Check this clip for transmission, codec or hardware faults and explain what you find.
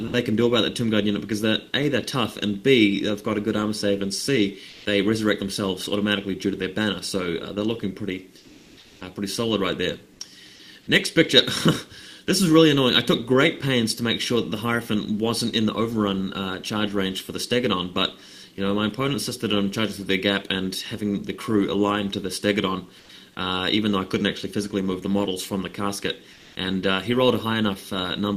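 Two kinds of fault turn up, both pointing to the sender's discontinuous transmission.

Sound dropped by the voice detector, 0.07 to 0.11 s: the detector likely judged the opening as background and stopped sending, so 40 ms of sound becomes steady filler noise.

Comfort noise in place of the background, at 4.71 to 4.83 s, 8.39 to 8.99 s, 22.99 to 23.07 s and 26.35 to 26.55 s: transmission likely paused and the receiver synthesized noise for 120, 600, 80 and 200 ms respectively. In those gaps the detailed background, about 25 to 28 dB below the loud parts, turns flat and featureless. The level shifts by about +2, −2, −5 and −1 dB.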